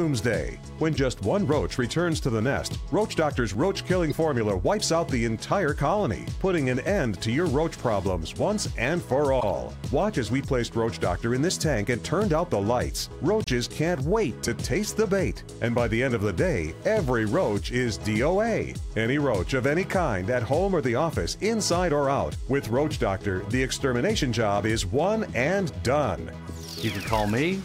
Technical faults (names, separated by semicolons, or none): corrupt frame decoded; corrupt frame muted